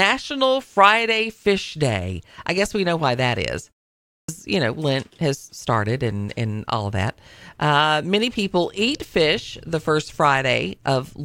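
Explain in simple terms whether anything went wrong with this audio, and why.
A clipped start after a pause occurs at 4.06 s. After 0.42 s of quiet, the output woke late and cut the first 0.22 s of speech, not just background silence.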